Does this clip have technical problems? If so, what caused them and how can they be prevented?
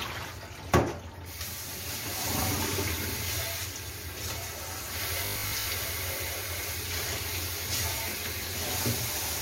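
Yes. From 5.26 to 5.68 s, robotic sound from repeated short buffers turns the sound into a rigid 50 Hz buzz, likely from one 20 ms fragment looping while most real audio is skipped. A spectrogram shows stripes every 50 Hz, and the waveform shows identical repeating cycles. Steadier audio delivery or a larger buffer prevents it.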